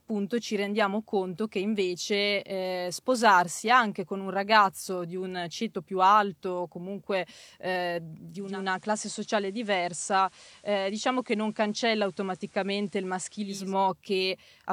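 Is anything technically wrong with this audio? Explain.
Yes. From 8.26 s to 13.76 s the receiver performs a digital radio blend to analogue FM, cross-fading over 386 ms after losing the digital stream. The level drops about 2 dB, and hiss sits around 30 dB below the speech.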